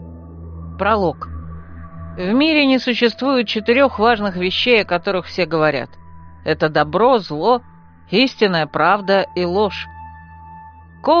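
No technical faults are audible.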